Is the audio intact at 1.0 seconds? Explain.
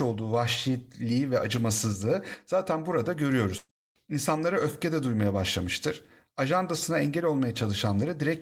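Yes, the speech at 1.0 seconds is intact, with no dropout, click, distortion or other fault at that moment.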